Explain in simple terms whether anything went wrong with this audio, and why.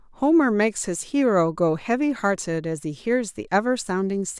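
Nothing went wrong: no faults turn up anywhere in the recording, so there's nothing to explain or fix.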